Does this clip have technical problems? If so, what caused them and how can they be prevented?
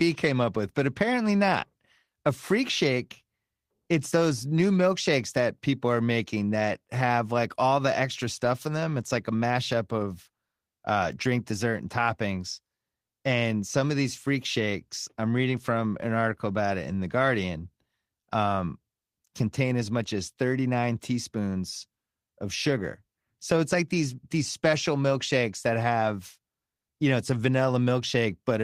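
No technical problems are audible.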